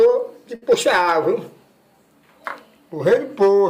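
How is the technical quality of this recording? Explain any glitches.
There is one glitch, a burst of packet loss from 0.55 to 0.64 s. Several packets arrived too late or never arrived. The receiver stretched the last sound for about 60 ms, fading it out. Then the audio jumps ahead, skipping about 60 ms.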